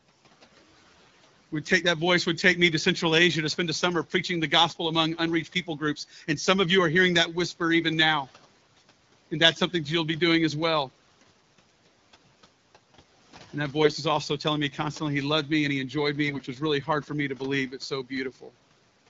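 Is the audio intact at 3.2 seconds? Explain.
Yes, the audio is intact at 3.2 seconds.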